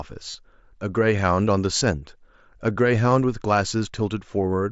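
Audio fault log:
0.30 to 0.35 s, 1.78 to 1.81 s and 3.11 s: concealed Bluetooth headset packet loss. Voice packets from headset to phone went missing, and the receiver filled each gap by repeating the best-matching stretch of the waveform just before it. The gaps of 37.5 ms and 30 ms sound like a brief buzzy tone held at full level, with a slight warble as real sound resumes. The 7.5 ms gap at 3.11 s fits a single lost frame and is nearly hidden.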